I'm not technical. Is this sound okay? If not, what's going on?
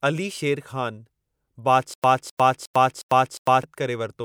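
No. From 1.94 to 3.63 seconds the speech has a stutter with silent gaps. A 0.26-second fragment plays five times, each followed by 0.1 seconds of silence. The likely cause is playback stalling and replaying its last piece, so that stretch of speech is lost.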